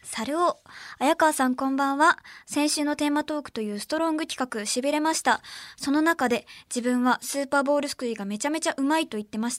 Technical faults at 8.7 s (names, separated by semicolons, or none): none